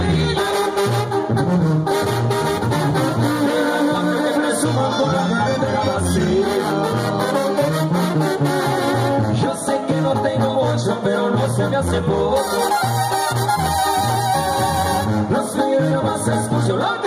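Gain pumping runs throughout: the level is pulled down by roughly 5 dB under each loud sound, likely from excessive gain feeding a fast limiter. Overlap-add ripple from 6.52 to 7.32 s: frames rejoined with a mismatched overlap make the level rise and fall about 6 dB at around 100 Hz, a metallic buzz.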